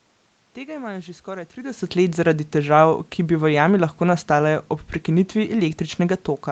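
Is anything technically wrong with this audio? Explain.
No, nothing stood out as a technical problem on listening to this clip.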